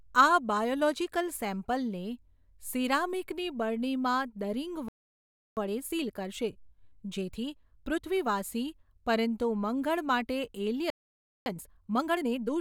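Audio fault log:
4.88–5.57 s: playback stall after "સીરામીકની બરણીમાં દરીંગ", speech cuts to silence for about 0.68 s, likely the player starving of data or being blocked.
5.57–8.29 s: time-compressed catch-up, speech runs 1.25 times fast at normal pitch as small pieces are cut and cross-faded away.
10.90–11.46 s: playback stall, speech drops out for about 0.56 s mid-flow, likely the output thread blocked or its buffer empty.
11.46–12.5 s: time-compressed catch-up, speech hurried to 1.5 times speed at unchanged pitch as cross-faded cuts shorten the backlog.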